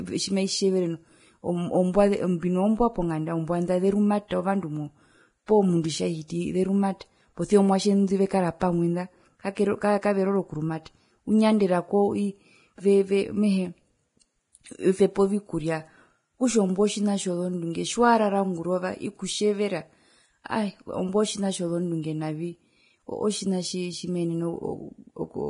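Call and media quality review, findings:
Vorbis compression, throughout: hissy, grainy treble, nothing above 10.6 kHz, likely a low-bitrate encode near 29 kbps. The residue is noise-filled rather than cleanly band-limited, unlike a plain low-pass.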